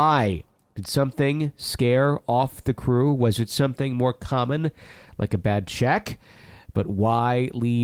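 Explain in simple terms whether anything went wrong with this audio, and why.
Nothing went wrong with this recording of speech. No faults turned up anywhere in it.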